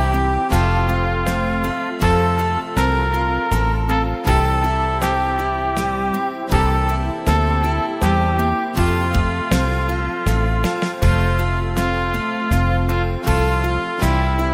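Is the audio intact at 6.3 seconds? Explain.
Yes, at 6.3 seconds the audio runs on cleanly, with no dropout, click, distortion or other fault to be heard at that moment.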